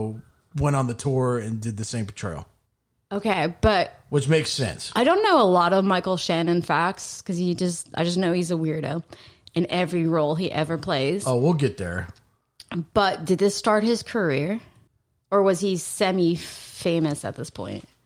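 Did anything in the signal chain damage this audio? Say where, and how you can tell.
No, nothing in this speech recording points to damage anywhere in the signal chain. No stage, from the analogue wiring through to playback, leaves an audible mark on it.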